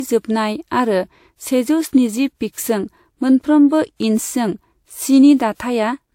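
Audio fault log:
throughout, transcoding between lossy codecs: Nothing above 16.6 kHz. Two sets of coding artefacts sound together, likely from a WMA encode re-encoded as Vorbis at a lower rate.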